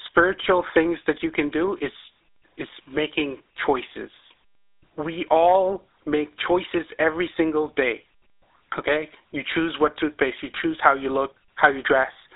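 Throughout the speech, GSM full-rate codec damage is plainly audible: pulse-driven vocal-tract coding, consistent with a 13 kbps full-rate coder, gives buzzy, gravelly voicing. A spectrogram shows a hard ceiling near 3.8 kHz above a 300 Hz to 3.7 kHz band.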